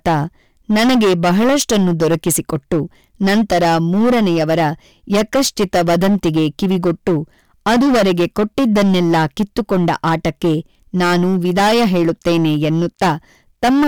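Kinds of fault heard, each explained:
Hard clipping: the speech is driven about 14 dB past what the stage can pass, so peaks are sliced flat on roughly one sample in seven. Those squared-off tops throw harmonics high up the spectrum, giving a harsh fuzz on every loud syllable throughout.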